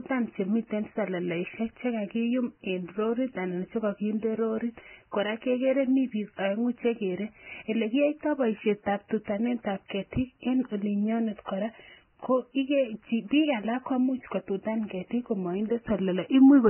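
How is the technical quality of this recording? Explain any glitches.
The quality is rough. Heavy lossy compression runs through the whole recording, and there's one pre-echo glitch partway through.

From start to finish the speech is band-limited and grainy, with nothing above 3.1 kHz and hissy, roughened detail just below that. It sounds like Vorbis compression pushed very hard, which fits a bitrate of around 10 kbps. At that setting the codec keeps a smooth outline of the spectrum, cuts the top off early, and quantises what's left in the treble so coarsely that the fine texture turns into noise of similar energy. That's where the fizzy, smeared quality on consonants comes from.

Between 9.88 and 9.90 s there's a pre-echo, a brief hiss smeared about 21 ms ahead of a sharp onset, so the attack lands soft instead of crisp. The codec processes audio in blocks and spreads its quantisation noise evenly across each one. 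When a transient sits late in a block, the noise budgeted for the loud part also leaks into the quiet stretch just before it.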